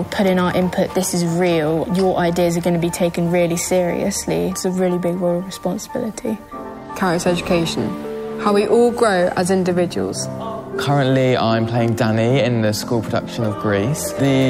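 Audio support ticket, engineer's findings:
No faults found on listening; audio path checks out with nothing to attribute to any component.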